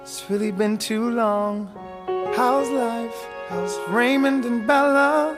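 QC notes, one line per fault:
Nothing stood out on listening to this audio.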